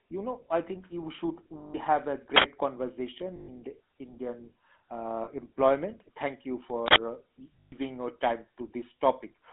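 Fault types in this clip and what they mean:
GSM full-rate codec: The speech went through the original GSM full-rate coder, which rebuilds the voice from a vocal-tract model driven by sparse regular pulses, at a rate that fits 13 kbps. The band is about 250 Hz to 3.6 kHz, with plainly audible buzzy, gravelly roughness throughout.
lost GSM frames: The decoder received bad frames and filled them by repeating the last good frame's settings. Each gap is a rough, metallic ring: 160 ms at 1.58 s, 120 ms at 3.36 s, 40 ms at 5.24 s and 120 ms at 7.6 s.
uninitialised buffer: Twice, playback read a block before any audio had been written into it, so leftover memory contents came out as samples. Each time this is an 80 ms burst of digital noise, at 2.36 s and at 6.88 s.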